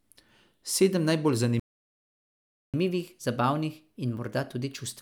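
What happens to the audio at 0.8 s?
Nothing goes wrong at 0.8 s: the speech continues intact through that moment, with no audible fault.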